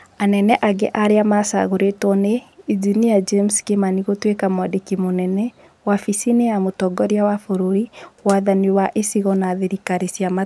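No dropouts, clicks, distortion or other transmission faults are audible anywhere in the recording.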